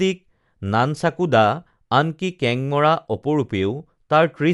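Throughout, the speech sounds dull, with nothing above 11.4 kHz and rough, fluttering noise around tones, likely Dolby Digital compression at roughly 64 kbps.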